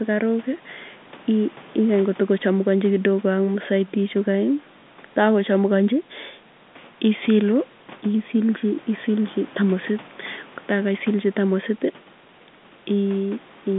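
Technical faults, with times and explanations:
No faults: the speech sits in a normal G.711 A-law telephone band, about 150 Hz to 3.6 kHz with nothing above 3.8 kHz, as expected for a fixed-line call.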